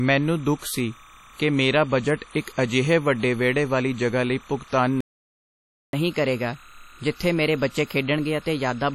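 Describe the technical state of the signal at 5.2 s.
At 5.2 s the audio is dead silent, because you're in the middle of a playback stall running from 5.00 to 5.93 s, about 0.93 s in all. The speech just stops mid-flow. The likely cause is the player running dry of data or its thread getting blocked, so output went quiet until it recovered.

Underneath that, for the whole clip, there's timecode bleed. It's a chirpy warble flipping between roughly 1 kHz and 2 kHz, an octave apart, sitting something like 25 dB under the speech. Linear timecode from a neighbouring track or cable is leaking in, and its rhythm fits a 29.97 frames-per-second code.

There's also WMA compression damage throughout, and it's heavy: ringing, washy speech with a hiss that swells and shrinks with the signal. That's what a transform codec smearing quantisation noise over long blocks sounds like, and the amount of damage fits a low bitrate around 32 kbps.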